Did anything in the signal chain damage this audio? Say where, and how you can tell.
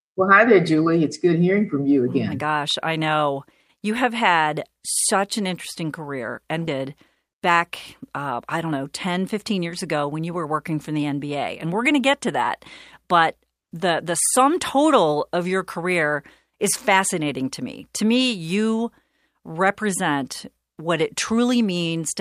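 Yes, and it's at the network and jitter buffer stage. At 6.67 to 6.69 s there's a skip ahead: the speech jumps forward with no gap and nothing patched in. Roughly 0.7 s of audio just isn't there, and the two sides are butted together. That's a chunk lost on the way or thrown away by the jitter buffer when it overflowed, so playback lands straight on later audio that was already queued.

Right after that comes jitter buffer speed-up. From 6.77 to 7.57 s the speech runs about 6% fast, and from 8.13 to 10.53 s about 8% fast, yet the pitch doesn't move. That hurried delivery at normal pitch is the giveaway: the receiver is snipping out tiny pitch-period slices over and over to drain excess delay. It takes out around 50 ms in the first stretch and around 0.2 s in the second.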